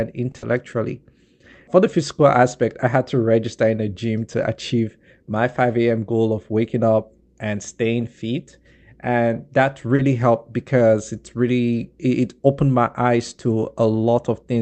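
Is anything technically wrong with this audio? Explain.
Yes. There are three brief network faults in this speech.

At 0.31–0.37 s and again at 9.96–10.02 s, just before "helped because it really", there is a short stall from a late packet. A packet arrived late, so the last sound was stretched for 30 ms, then resumed with nothing lost.

At 0.38–0.45 s comes a short concealed packet loss. Here 40 ms never arrived and was synthesized from the preceding sound, giving a smear or wobble where real audio is actually missing, unlike the stalls.

The Opus call path keeps audio up to about 8 kHz.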